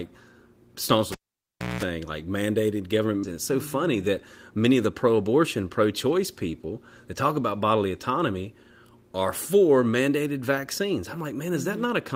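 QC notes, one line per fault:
1.12–1.83 s, cable pulled and plugged in: a pop, 0.66 s of near silence, then 0.2 s of 60 Hz mains buzz as the tip touches, and another pop.
3.23–3.34 s, skip ahead: about a second of speech is dropped. Playback jumps forward, with both sides joined almost directly and no real gap.
4.56–4.91 s, jitter buffer speed-up: speech runs at 108% at unchanged pitch. Short pitch-period pieces, a few tens of milliseconds in all, are cut to reduce delay.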